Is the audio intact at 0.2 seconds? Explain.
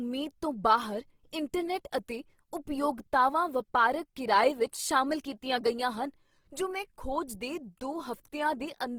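No. Speech at 0.2 s, like the whole clip, shows Opus compression, likely in its CELT music mode at a starved bitrate that fits roughly 16 kbps. Band energies are kept but detail is filled from folded bands or noise, so the speech sounds plainly rough and grainy.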